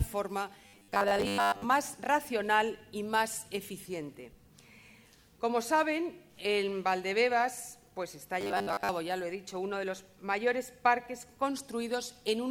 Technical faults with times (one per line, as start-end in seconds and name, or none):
0.67-1.64 robotic sound from repeated short buffers
8.41-8.89 robotic sound from repeated short buffers